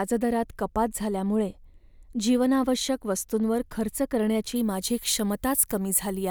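From 4.56 s, pre-emphasis left on: uncorrected 50 µs treble boost, about 11 dB at 10 kHz, sounds thin and sibilant; spectrogram highs brighten.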